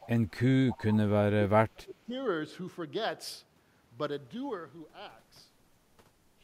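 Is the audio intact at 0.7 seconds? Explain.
No, there's an echo leak right there, from 0.69 to 0.78 s. A faint, delayed copy of the speech slips in, trailing the original by 256 ms and sitting well below it, roughly 20 dB down. The likely cause is that the far end was on a loudspeaker and its echo canceller didn't fully scrub what its mic picked up, so that residue got sent back and lands as a short ghostly scrap under the speech.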